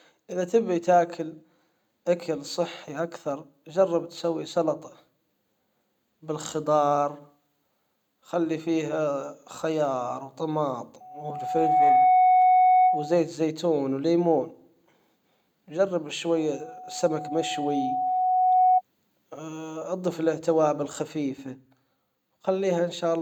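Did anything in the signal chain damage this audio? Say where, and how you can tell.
Yes. There's loudspeaker feedback squeal in the speech, an acoustic problem at the mic-and-PA stage rather than anything digital. A tone near 739 Hz swells up from 11.00 to 13.31 s, building in under a second, then comes back at 16.36 to 18.82 s, creeping up more slowly over a couple of seconds. Both times it sits roughly 10 dB above the speech. The mic was hearing its own loudspeaker, and at that one frequency the loop gain went past unity, so it fed on itself.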